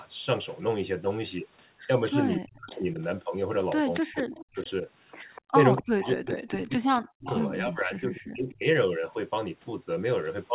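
An echo canceller on the far side, likely running a loudspeaker call, fails to remove what its microphone picks up, so an echo leak sends a delayed copy of the speech back about 243 ms late. The first leak runs from 2.31 to 2.84 s at about 25 dB below the speech and sounds like a faint trailing ghost. The later leaks, from 3.94 to 4.71 s and from 5.35 to 7.4 s, are louder at about 15 dB below the speech and sound like a clearer repeat.

Each time the echo arrives, the canceller likely cannot tell the local talker from the returning echo and turns both down. This is speech suppressed in double talk. It happens from 2.38 to 3.01 s, from 4.0 to 4.85 s, and from 5.54 to 8.65 s, the longest stretch, which covers about two seconds of damage. The speech drops by up to about 40 dB, so it dips sharply. All of this sits inside narrowband audio that ends at 4 kHz.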